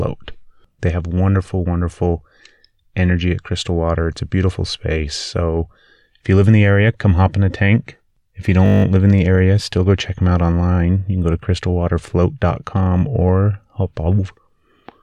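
From 8.66 to 8.84 s, just before "live in the area", the speech freezes into a steady 50 Hz buzz: a system hang loop, where the sound hardware replayed one 20 ms stretch of buffer nine times while the system stalled, with essentially nothing lost afterward.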